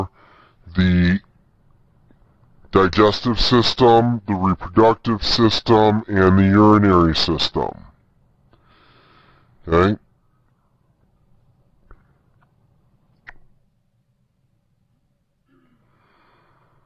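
Throughout the clip, everything sounds slowed and dragged downward, running at 0.73 times normal speed with pitch lowered by 5.6 semitones. This is a wrong sample rate fault: the shift fits 44.1 kHz material being played back at 32 kHz without conversion.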